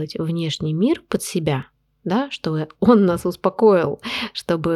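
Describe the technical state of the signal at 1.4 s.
At 1.4 s the signal is inside a run of CD scratch ticks from 1.36 to 1.89 s: three short, evenly spaced ticks, the longest around a millisecond, where a disc blemish overwhelmed error correction once per revolution.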